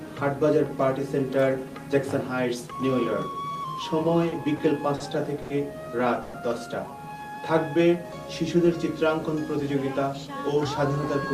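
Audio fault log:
4.03–5.03 s, repeated stalls (stutter): four brief late-packet stalls, 120 ms filled in total, longest 50 ms; waveform shows short repeated held stretches interrupting normal flow.
5.42–5.53 s, short stall from a late packet: buffer ran dry, last sound stretched 80 ms; spectrogram shows horizontally smeared, frozen frequency bands before the audio resumes.
6.22–6.37 s, call audio freeze: sound continues unnaturally for 120 ms without dropping to silence, likely from held-up packets; spectrogram shows flat, smeared bands, waveform a repetitive fading texture.
7.35–8.10 s, jitter buffer slow-down: repeated pitch periods add 36 ms, running at 96% speed with pitch unchanged; spectrogram features look slightly stretched in time.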